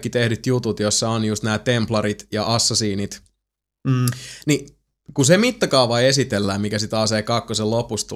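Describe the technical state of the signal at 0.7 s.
At 0.7 s the speech signal is intact, with no audible fault at that moment.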